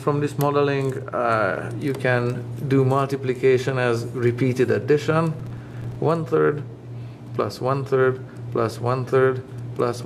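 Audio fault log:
5.40–5.96 s, processor overload crackle: a burst of gritty crackle. The processor fell behind and missed around ten buffer deadlines, each buffer lasting a few milliseconds. Every miss inserted a short hard-edged silent gap, and the run of gaps forms the tearing texture.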